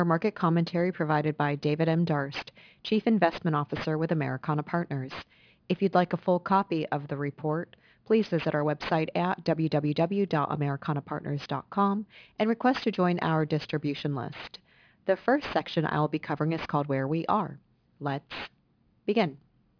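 Throughout the speech, aliasing is present. The sample rate was reduced without an anti-aliasing filter, which fits a drop from 44.1 kHz to 11 kHz. Energy above the 5.5 kHz folding point mirrors back down into the band as unrelated, inharmonic frequencies, sitting roughly 20 dB below the signal. Sibilants come out gritty and metallic, and the spectrum stays dense right up to the 5.5 kHz edge instead of rolling off.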